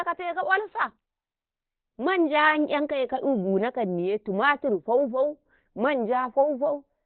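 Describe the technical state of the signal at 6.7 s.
At 6.7 s the speech sounds muffled and hoarse, with nothing above about 4.2 kHz, as it does throughout the clip. The likely cause is heavy Opus compression in its narrowband speech mode, which points to a bitrate near 12 kbps.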